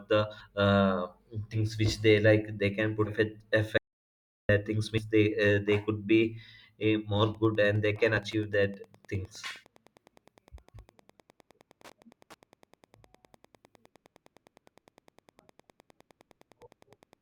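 Compressed frames skipped first at 0.40 s, again at 1.52 to 1.56 s just before "which they", and at 3.05 to 3.09 s just after "they can". Whole blocks of encoded audio never reach the output, so the sound lurches forward. The jumps span roughly a tenth of a second at 0.40 s and 3.05 s, and a much shorter stretch at 1.52 s.

From 3.78 to 4.49 s there is an audio dropout to silence lasting 715 ms. The signal stops mid-flow and the gap is silent, with no room tone, before the sound resumes abruptly. This most likely comes from the input being lost while recording continued to write silence. Whatever occurred in that interval is absent.

Further frame skips occur at 4.97 to 5.03 s, roughly a tenth of a second lost, and at 6.83 to 6.85 s, about half that. Both have the same hop forward, and the jump lengths point to a codec built on 10 ms frames.

Wi-Fi interference begins at 7.31 s and continues to the end. 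A nearby radio's beacon, repeating every 102.4 ms, is rectified in the audio circuit and produces a steady tick near ten per second, sitting about 35 dB below the signal.

The last frame skip, at 8.17 to 8.21 s, drops a few frames' worth of audio underneath the ticking and leaves another brief jump.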